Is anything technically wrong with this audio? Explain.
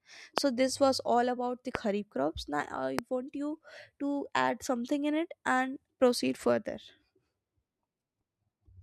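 Yes. Three loud pops, each about 20 ms long, sit on top of the speech at 0.38 s, just before "this was all about"; at 1.75 s, right after "was all about the"; and at 2.99 s, just before "want you to add". Each is a single sharp transient peaking about 20 dB above the speech, likely from a voltage spike such as a switch, plug or static discharge that the downstream circuitry briefly shaped. The speech carries on underneath each one, which separates these pops from dropouts or edit clicks, where the sound itself breaks.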